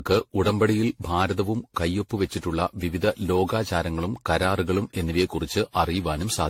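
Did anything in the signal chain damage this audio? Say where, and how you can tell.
Yes, codec stage: the speech is swirly, hollow, smeared throughout, attacks blurred, nothing above 16.5 kHz. This is likely generation loss, roughly seven AAC-LC re-encodes compounding quantisation noise.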